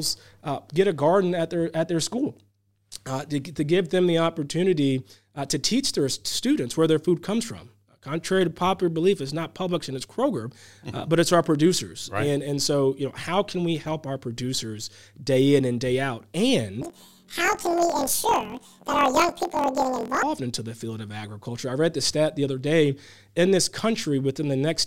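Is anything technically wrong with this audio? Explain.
Yes. From 16.82 to 20.25 s, planar audio is read as interleaved: each block holds all left samples then all right samples but is taken as alternating pairs, so every 23.22 ms block plays twice at double speed. The speech jumps an octave high with a 43.1 Hz flutter, which fits 1024-sample blocks.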